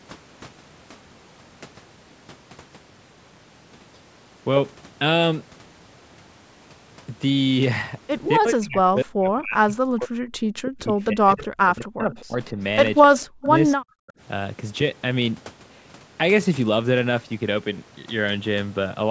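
From 8.38 to 10.17 s, again from 10.63 to 11.48 s and from 11.64 to 12.59 s, the echo canceller likely mistook simultaneous talking for echo: speech suppressed in double talk, dipping by as much as about 40 dB and breaking into pieces. At 12.20 to 12.24 s and 13.02 to 13.24 s, echo leak, likely from a loudspeaker pickup the canceller missed, returns a faint copy 259 ms late, quiet at first, then louder. Brief suppression recurs at 13.26 to 13.54 s, 13.76 to 13.82 s and 14.07 to 14.12 s.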